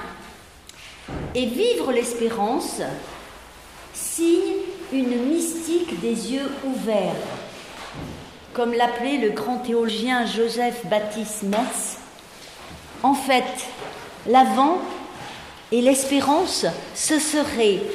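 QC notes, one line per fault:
9.88 s, compressed frames skipped: a run of compressed frames never reached the output, either missing from the stream or rejected by the decoder as damaged, so playback leaps forward by about 150 ms, which fits roughly seven frames of 21.3 ms each. The sound jumps abruptly ahead, losing a short stretch of material.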